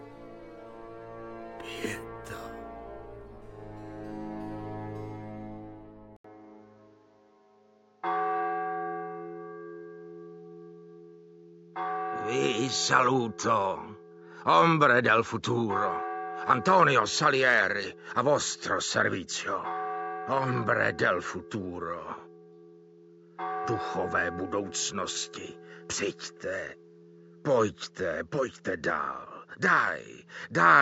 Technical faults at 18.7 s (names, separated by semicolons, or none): input switched to a poorer device